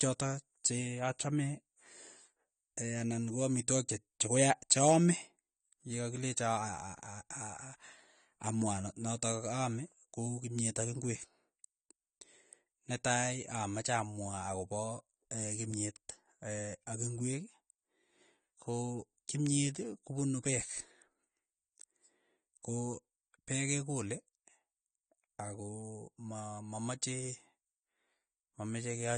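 Throughout, the speech sounds dull and smeared, with fizzy warbling and nothing above 9 kHz, likely AAC compression at a bitrate around 32 kbps.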